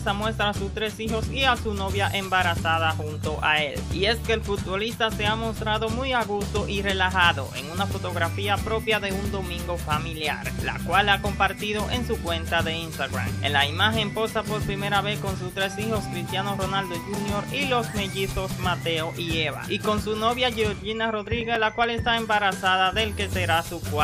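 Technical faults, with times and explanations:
21.27–22.12 s, CD scratch ticks: seven small ticks in under a second, each a few milliseconds at most. Each time the disc comes round, the scratch wipes out more data than error correction can rebuild, so the player patches or mutes those samples, leaving that regular clicking.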